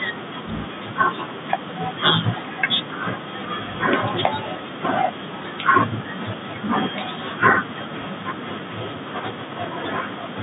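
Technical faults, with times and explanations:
Nothing here counts as a fault: the speech simply comes over an ordinary telephone-style line, with the band running from roughly 150 Hz to 3.7 kHz and nothing above about 3.8 kHz, exactly as that kind of connection should sound.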